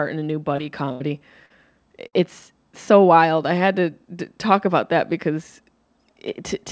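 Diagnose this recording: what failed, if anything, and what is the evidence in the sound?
The network stage failed, with short concealed packet loss in two places: 0.56 to 0.60 s, right after "in a new", and 1.46 to 1.52 s. About 20 ms and 40 ms of audio never arrived in time. The receiver papered over each hole by extending the preceding sound, pitched where it was voiced and noise-like where not, then crossfaded back. Each gap is heard as a brief smear or wobble in the speech.

Two bursts of packet loss also occur, again on the network leg: 0.92 to 1.02 s, with about 80 ms lost, and 2.08 to 2.15 s, with about 60 ms lost. Here the concealment had to run longer, so the held sound decays into a fading buzz or hiss before the speech picks up further along. The stretch in between is simply absent. The call path's G.722 band limit, with nothing above 8 kHz, sits under all of this.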